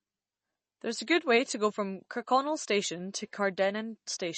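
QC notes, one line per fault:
Throughout: MP3 compression, likely cause; plainly audible codec damage and nothing above 8.3 kHz, which fits a low bitrate near 32 kbps starving weak frequency lines.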